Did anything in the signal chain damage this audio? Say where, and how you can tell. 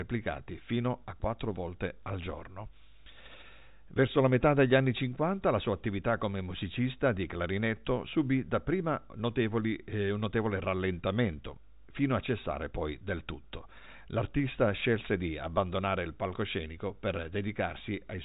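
No, nothing in the chain damaged this speech; the band stops below 4 kHz because it went through G.711 A-law telephone coding, which is working as designed.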